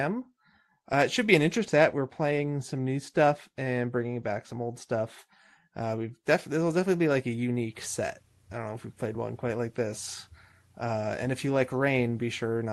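From 1.58 s to 5.19 s, right after "it should be an", the speech turns dull and muffled. This is de-emphasis applied wrongly: a treble-cut filter meant to undo pre-emphasis was applied to a signal that had none, or was applied twice. The response slopes down smoothly with frequency and sits about 11 dB lower at 10 kHz than at 1 kHz, so the upper band that the call's Opus path would otherwise carry sounds damped.

At 1.68 s, inside that muffled stretch and just after "it should be an", there is a skip ahead. Roughly a fifth of a second of audio was dropped while later audio was already waiting, and nothing fills the gap. The two sides of the cut join almost directly, so the speech jumps forward abruptly. The jump suggests a jitter buffer that dropped queued audio to reduce its delay.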